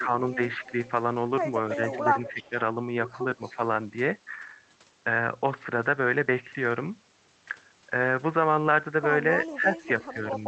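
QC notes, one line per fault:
0.0–0.62 s, 1.75–2.55 s, 3.37–3.59 s, 9.39–9.82 s: speech suppressed in double talk. In each of these stretches the voice ducks by up to about 10 dB in short bites, a few hundred milliseconds at most each time, so it sounds pumped and choppy. It lines up with the echo scraps, so the likely cause is the echo canceller hearing both sides at once, failing to separate them, and pulling everything down.
0.64–0.89 s, 1.69–2.49 s, 3.43–3.56 s, 9.43–10.41 s: echo leak. A faint delayed copy of the voice trails it by 299 ms, sitting about 20 to 30 dB below the speech. It's loudest around 1.7–2.5 s and longest near the end. The likely cause is a loudspeaker on one end of the call whose canceller let some of its own pickup slip back into the call.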